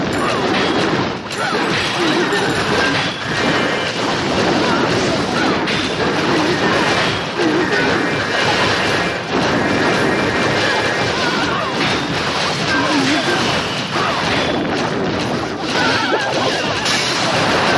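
Faint ticks recur at a steady 10 per second throughout the audio, the sign of a resampler restarted on every block. Each 100 ms block was converted from 48 kHz to 24 kHz separately, leaving an edge error. Unlike buffer underrun clicks, these are evenly spaced, carry no gaps, and vanish when the signal stops.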